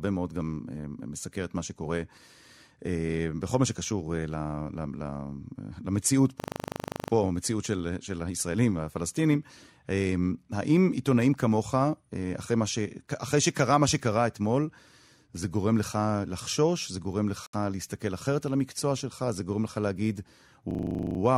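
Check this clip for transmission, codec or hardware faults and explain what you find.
The speech has two system hang loops and one gap at a join of encoded pieces.

From 6.4 to 7.12 s, and again from 20.71 to 21.19 s, the audio hits a system hang loop. The machine or driver stalled while the sound hardware kept replaying the same 40 ms of its ring buffer, 18 times in the first event and 12 in the second. The result is a rattling buzz at 25 Hz. On a spectrogram it shows as vertical stripes repeating every 40 ms, and the waveform repeats identically. The speech resumes with essentially nothing lost.

At 17.46 s, a gap at a join of encoded pieces drops out about 69 ms of sound. Two separately encoded pieces were joined without trimming, so the encoder's start-up delay and the final-frame padding both stayed in. The waveform shows a flat stretch with slightly smeared edges, and the spectrogram shows a narrow blank column across all frequencies. 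The speech then continues from where it stopped.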